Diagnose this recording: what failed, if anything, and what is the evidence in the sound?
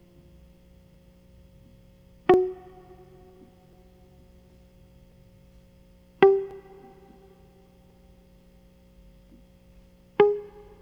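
Clock drift buffer slips, 0.94 to 10.69 s: regular clicks every 1.39 s through the music, likely a buffer slipping samples between clocks about 700 ppm apart.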